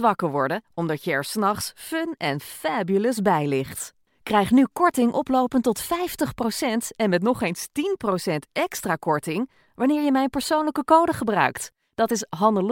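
Two devices in the speech path were likely running on separate, unsynchronised clocks drifting apart by something like 100 ppm, so each time the drift added up to a whole sample, one sample was dropped or repeated. The result is clock slip clicks from 0.22 s to 12.67 s: faint, evenly spaced ticks roughly every fifth of a second, some fifty in all, most noticeable under the louder, sustained parts of the speech.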